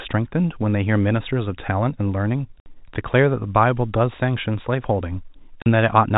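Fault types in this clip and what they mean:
Packet loss filled with silence: missing packets were replaced with silence. Holes of 60 ms at 2.6 s and 40 ms at 5.62 s fit 20 ms packets.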